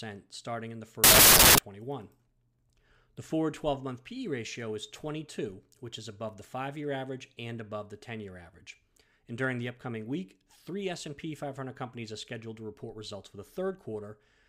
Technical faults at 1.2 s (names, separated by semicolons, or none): wrong sample width